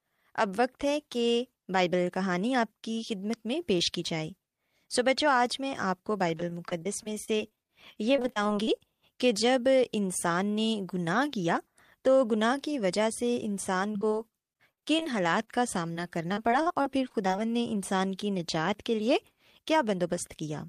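Repeated packet loss hits the speech twice. From 6.37 to 8.82 s, packets keep arriving lost or late, leaving about 22 short holes, the longest 37 ms. The receiver patches each by extending the last sound, so about 18% of that stretch is concealment. The speech turns choppy. The same fault returns from 13.93 to 17.40 s, with about 20 holes, the longest 59 ms, and about 14% concealed.

Then, from 19.40 to 19.99 s, a jitter buffer speed-up occurs. The buffer has filled beyond its target, and the receiver trims short pitch-period pieces again and again, about 50 ms in all, to bring the delay back down. The speech plays about 7% fast with its pitch unchanged, so this closing stretch sounds hurried.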